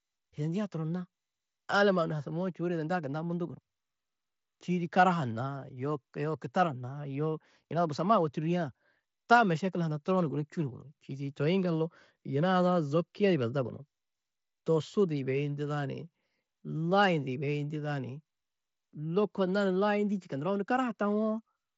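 No technical faults can be heard in this speech.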